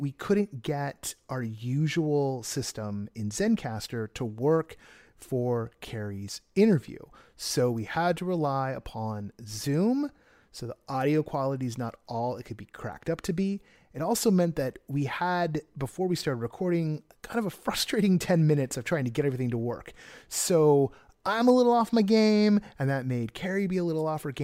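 Nothing in this recording trips a technical alarm, as no dropout, glitch or distortion turns up anywhere along the way.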